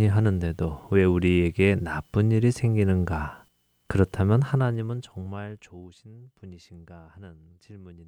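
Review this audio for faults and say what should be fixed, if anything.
From 4.46 to 5.87 s the speech drops by roughly 25 dB, and as it falls a fine ticking, zipping texture rides on top of it. This is zipper noise. Instead of gliding, the gain moves in coarse jumps, around 30 a second, and each jump cuts the waveform abruptly and leaves a small click. Those clicks run together into the zipper sound. To prevent it, interpolate the gain per sample or apply a short smoothing ramp so level changes never land in discrete steps.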